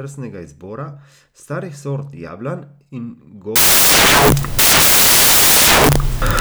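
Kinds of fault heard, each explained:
Samples built from the wrong bytes: from 3.56 s to the end, the reader assembles each sample's bytes misaligned or in swapped order, so the rapidly changing low-order bits dominate every value and the speech collapses into loud, harsh broadband noise, close to white on the louder passages.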